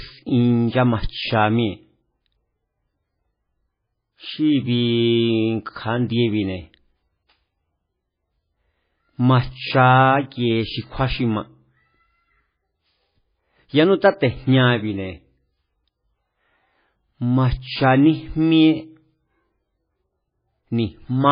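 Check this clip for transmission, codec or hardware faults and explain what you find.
One codec fault runs through the whole clip. Throughout, likely heavy MP3 compression: treble ends at 5 kHz, and starved frequency lines flicker between frames, sounding swirly and watery, unlike a clean low-pass filter.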